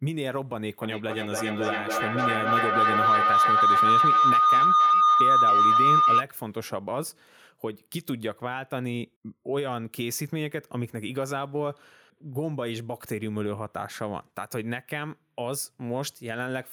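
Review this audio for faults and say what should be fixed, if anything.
Feedback howl from 0.82 to 6.29 s: the mic-to-speaker loop keeps gaining, ringing near 1.5 kHz, pulsing about every 300 ms and peaking about 10 dB over speech. To prevent it, mute or use headphones on any second device in the room.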